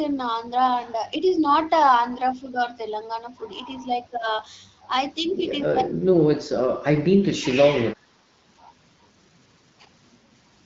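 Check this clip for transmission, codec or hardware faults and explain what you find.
The clip has one kind of fault, speech suppressed in double talk, at four points: 2.35 to 2.59 s, 4.11 to 4.26 s, 5.66 to 6.22 s and 6.39 to 7.45 s. The speech level sinks slightly at first, by about 5 dB. It then drops harder, to about 15 dB and about 25 dB, and by roughly 30 dB in the final stretch, which lasts about a second. The likely cause is an echo canceller that, with both ends talking at once, could not tell the near talker from loudspeaker echo and turned the speech down. On a waveform the envelope pinches inward across those spans. On a spectrogram the speech energy fades toward blank over the full band, up to the HD Voice codec's 7 kHz limit.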